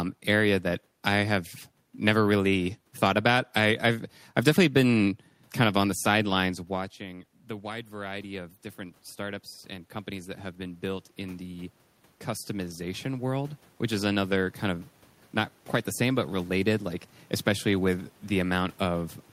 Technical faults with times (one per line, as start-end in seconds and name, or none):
6.69-11.76 automatic gain rising
12.47-14.90 automatic gain rising